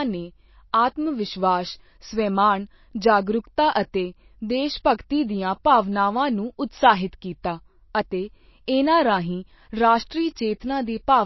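Throughout the speech the treble stops dead at 5.8 kHz, and weak detail swirls and warbles, with metallic chirps on s sounds; this is plainly audible damage that likely comes from MP3 compression at a bitrate around 27 kbps. A spectrogram shows a flat ceiling and flickering, patchy holes below it.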